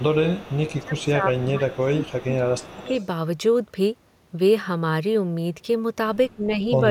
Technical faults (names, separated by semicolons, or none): echo leak; speech suppressed in double talk